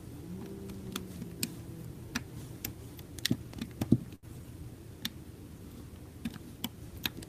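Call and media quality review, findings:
Short stall from a late packet, 4.15–4.26 s. Jitter buffer ran empty when a packet missed its playout slot. Receiver held the last sound for 75 ms, then resumed from the same point with nothing lost. Audible as a briefly frozen hold with a slight buzz or dip. Playout delay rose by 75 ms afterwards.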